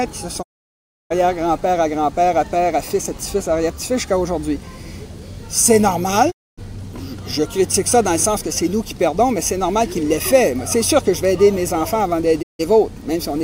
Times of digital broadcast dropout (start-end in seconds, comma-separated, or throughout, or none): 0.41-1.12, 6.30-6.59, 12.41-12.61